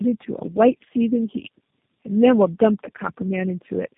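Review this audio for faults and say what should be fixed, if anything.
Tandem speech coding affects the whole clip. The speech sounds rough, muffled and warbly, with nothing above 3.5 kHz. The sound points to three low-rate speech coders in a row, each re-coding the previous coder's damage rather than clean audio. To prevent it, keep one speech codec end to end, or pass the coded stream through without decoding it at each link.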